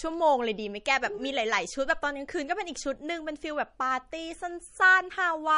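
From start to finish the speech carries plainly audible MP3 compression, likely from an encoder starved of bits, with damage that fits a bitrate somewhere near 39 kbps. Nothing survives above 10.6 kHz, so the top end sounds sheared off and the s sounds lose their air. Weaker frequency lines get dropped and return from frame to frame, which gives the whole thing a watery, swirly texture, and consonant onsets come out smeared rather than crisp.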